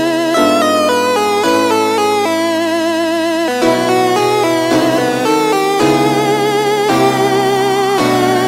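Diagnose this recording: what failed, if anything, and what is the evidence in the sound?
A crude rate conversion fails at the sample-format conversion stage from 4.04 s to the end: a gritty, inharmonic fizz, roughly 25 dB below the sound, tracks loud and high passages. Samples are repeated rather than filtered, which fits a 44.1 kHz to 48 kHz step. Unlike codec artefacts, the fizz is steady, not warbling.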